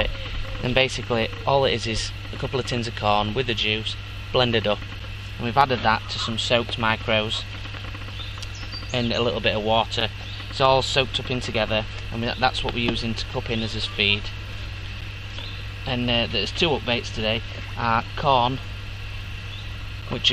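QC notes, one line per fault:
5.00, 10.00, 15.01 and 20.02 s: gap between chunks. A hard-edged hole of about 7 ms cuts in every 5 s. Silence sits at each join where one chunk ends late or the next starts late. Nothing is lost. The sound simply stops and resumes abruptly.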